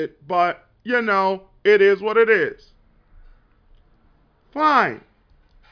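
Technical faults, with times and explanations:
No technical faults can be heard in this speech recording. There is nothing to mark with a time or explain.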